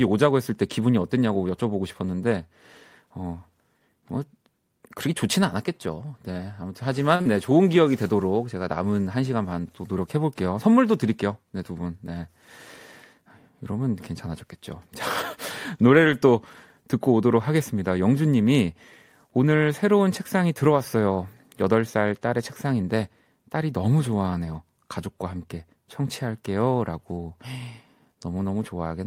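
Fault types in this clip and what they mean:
Short stall from a late packet: a packet arrived late and the sound near 7.15 s is held about 39 ms too long, showing as flat, smeared spectrogram bands.
Short concealed packet loss: about 40 ms never arrived around 7.21 s and was filled by continuing the last sound, showing as a blurred patch.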